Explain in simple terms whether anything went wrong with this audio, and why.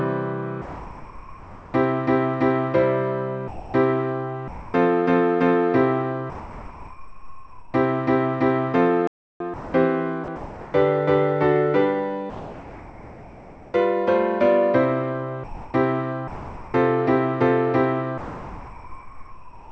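Yes, several things went wrong, mostly in how the sending side decided when to transmit.

Sound dropped by the voice detector at 0.62 to 1.74 s, 6.30 to 7.74 s and 18.18 s to the end: the sound gives way to a steady, smooth hiss for most of a second each time. The likely cause is a sender misjudging real sound as background and pausing. Unlike chopping, it is one clean gap per stretch.

Sound chopped by the voice detector at 3.48 to 4.74 s, 9.54 to 10.74 s and 15.44 to 16.74 s: here the sound flickers on and off more than once within each stretch, with bits of hiss between. The likely cause is a sender switching transmission on and off repeatedly rather than stopping once.

Playback stall from 9.07 to 9.40 s: the audio simply goes silent for about a third of a second, then carries on. There is no hiss filling it, which sets it apart from the detector gaps. The likely cause is the player running short of data.

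Comfort noise in place of the background from 12.30 to 13.74 s: no sound is cut, but the natural background turns into a flat, slightly quieter, featureless hiss. The likely cause is a sender pausing during a quiet moment while the receiver fills in artificial noise.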